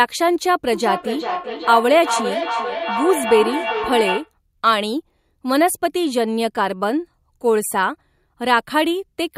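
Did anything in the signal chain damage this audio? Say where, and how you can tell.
Yes. From 0.72 s to 4.34 s there is feedback echo between two devices, a fault at the call-processing stage. The speech comes back at a steady interval of roughly 400 ms, growing thinner and more ringing. The loudest return is about 6 dB below the direct speech. Room reverberation would smear into a continuous tail, and a single far-end echo would return only once. These evenly spaced copies show a loop: one device plays the other's microphone feed, that microphone picks it up again, and neither echo canceller removes sound its own device didn't play.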